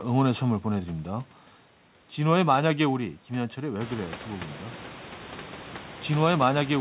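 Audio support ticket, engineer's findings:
No faults found in the speech. The call path leaves nothing above 4 kHz, which fits G.711 A-law at 64 kbps, and the room noise rises by about 17 dB at roughly 4 s.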